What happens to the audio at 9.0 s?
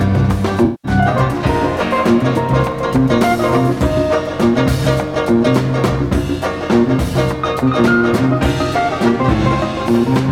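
Nothing goes wrong at 9.0 s; the audio runs through that moment intact, with no dropout, click or other disturbance.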